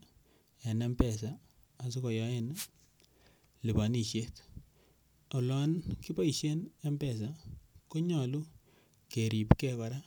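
A speech recording with one wireless microphone noise hit from 2.53 to 2.68 s. A brief burst of static swishes over the voice. The microphone's radio signal faded as reflections cancelled, letting receiver noise through.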